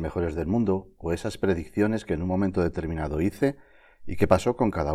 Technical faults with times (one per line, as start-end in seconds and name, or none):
none